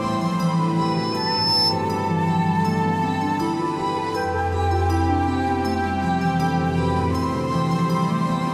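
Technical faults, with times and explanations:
0.81 to 1.81 s, loudspeaker feedback squeal: a 5.3 kHz tone swells over most of a second to sit above the music. The microphone-loudspeaker loop gain exceeds one there.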